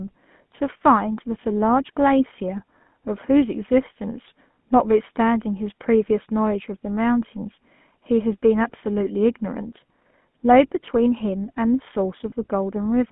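From the start, the whole recording carries the sound of the GSM full-rate codec. The voice comes through a narrow line band of roughly 150 Hz to 3.4 kHz, with nothing audible above that. The coder rebuilds speech from a vocal-tract model excited by a coarse, regularly spaced pulse train, which fits a 13 kbps full-rate stream. That sparse excitation gives the speech a plainly audible buzzy, gravelly roughness.

Between 12.30 and 12.33 s there is a brief case of lost GSM frames. The 20 ms gap fits a single dropped frame. The decoder bridges it by reusing the previous good frame's parameters, so the preceding sound is briefly held with a rough, metallic ring instead of continuing naturally. The gap is too short to fade toward silence, and normal decoding resumes right after.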